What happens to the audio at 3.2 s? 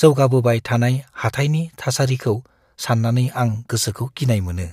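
Nothing goes wrong at 3.2 s: the speech carries on intact through that moment, with no dropout, click or distortion to be heard.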